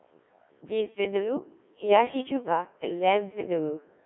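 Throughout the speech the voice sounds robotic and buzzy, confined to a thin 300 Hz to 3.4 kHz telephone band. This is Codec 2 vocoder damage, heavy here at 1.3 kbit/s: only pitch, voicing, energy and spectral envelope survive, and the decoder rebuilds the voice from sine waves rather than the original waveform.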